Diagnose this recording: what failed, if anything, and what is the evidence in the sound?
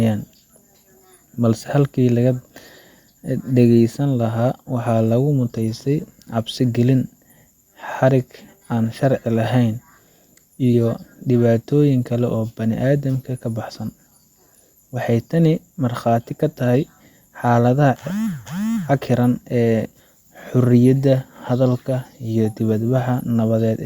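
Listening closely to the speech, nothing stood out as a fault at any stage of the chain.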